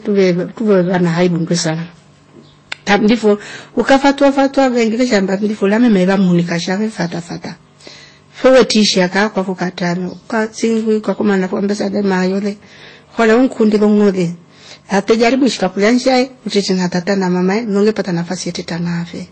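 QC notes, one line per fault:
Throughout, hard clipping: the louder syllables are pushed about 11 dB past what the chain can pass, so their peaks get sliced flat. It's only a small share of the samples, around two percent, but those flat tops spray high harmonics and you hear a gritty crackle on every loud peak.
Throughout, transcoding between lossy codecs: the top end is gone above 8.3 kHz, and two different kinds of codec artefact are heard together. That's likely a low-rate MP3 pass around 33 kbit/s followed by Vorbis around 26 kbit/s, each adding its own damage.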